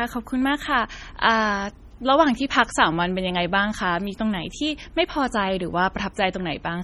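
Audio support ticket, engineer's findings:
Watery, swirly speech throughout, sibilants chirpy and metallic, consonant attacks smeared; band reaches about 21.2 kHz. Likely MP3 compression, heavy, in the encoder: starved bits let weak frequency lines flicker between frames, which fits roughly 32 kbps.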